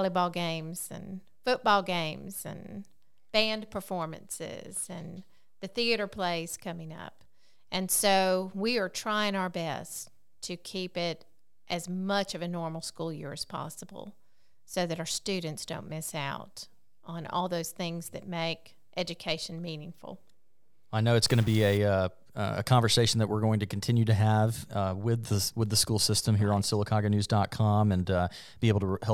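A data bit likely stuck at a fixed value in the converter or a data line throws a stuck bit from 21.27 to 21.77 s, after "I know it's" and before "uh a conversation that". About half the samples jump by a step of about -40 dBFS, adding harsh, buzzy distortion and audible noise in the quiet gaps.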